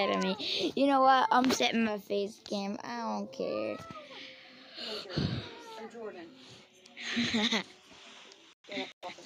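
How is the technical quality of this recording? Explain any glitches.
No technical faults are audible.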